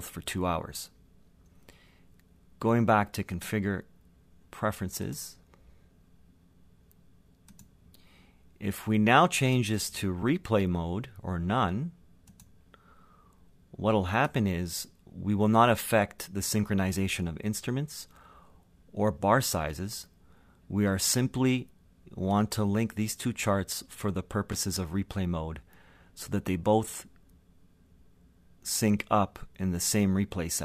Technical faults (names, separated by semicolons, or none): loose connector crackle